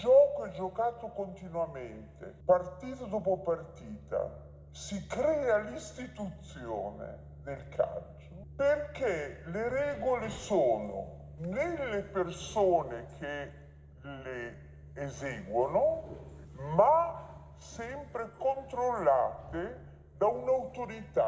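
Throughout, the audio plays slow and low, at about 0.73 times normal speed and roughly 5.5 semitones down: a wrong sample rate, which fits material recorded at 22 kHz played at 16 kHz. A spectrogram shows every feature shifted downward and stretched in time, with a waveform to match.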